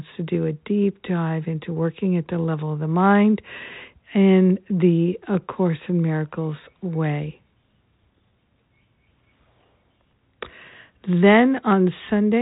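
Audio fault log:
No faults heard in this speech clip.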